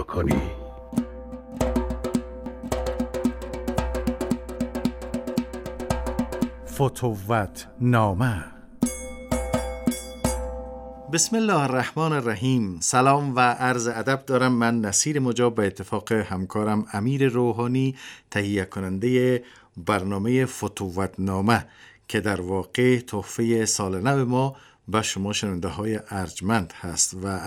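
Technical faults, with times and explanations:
2.46 s and 13.93 s: dropped buffer (overrun), the sound jumps ahead, likely unread samples overwritten; the waveform shows an abrupt seam with no silent gap.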